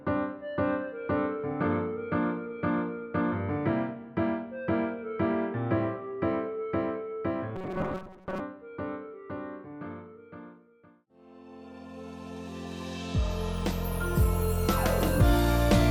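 Between 7.56 and 8.41 s the sound turns into a stiff, metallic buzz pinned at 188 Hz that only loosely tracks what was there before. That's the classic robotic sound from repeated short buffers: new audio is likely arriving too late, so playback keeps looping the last chunk, about 5.3 ms long to match that buzz, while the real audio gets dropped. Something like seven tenths of that stretch sounds like repeats rather than fresh material.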